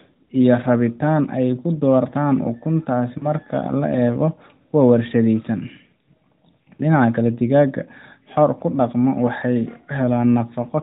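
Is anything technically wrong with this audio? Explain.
Yes. From 3.18 to 3.32 s there are lost AMR speech frames. About 40 ms of audio failed to decode, which fits two 20 ms frames. The decoder reused the last good pitch and vocal tract settings at falling gain, so the narrowband speech briefly smears and dips before recovering.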